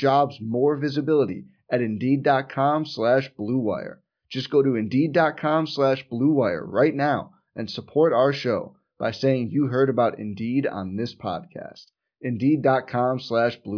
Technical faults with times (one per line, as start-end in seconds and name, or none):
none